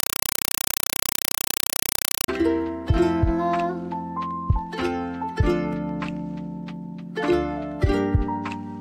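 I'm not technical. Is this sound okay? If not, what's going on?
No. From 0.0 to 2.28 s you hear a compressed stream played as audio: coded Dolby Digital data going straight to the speakers undecoded. That makes loud chattering static, short 4 ms bursts repeating 31.25 times a second. Random interference would crackle unevenly, without that steady rhythm.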